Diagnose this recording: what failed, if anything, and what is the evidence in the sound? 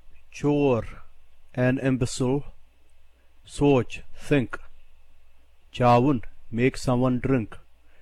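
Nothing in the recording points to a failure at any stage of the chain: the signal stays continuous, with no gaps, clicks, distortion or timing disturbances anywhere in the clip.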